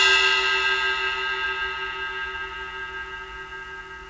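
Nothing stood out on listening, and the absence of content above 8 kHz simply fits a wideband call path such as G.722.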